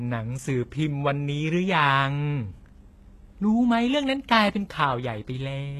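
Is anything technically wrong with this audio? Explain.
Yes. The speech has likely been through HE-AAC compression, audible across the whole clip. Nothing sounds above 12.3 kHz. The treble is rebuilt by copying lower bands upward, so its harmonics don't line up with the real ones. S sounds turn gritty and metallic. The damage points to a bitrate near 16 kbps.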